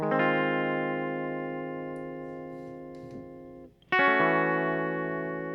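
Nothing in this bit of music stands out as a technical fault, so there's nothing here to point to or explain.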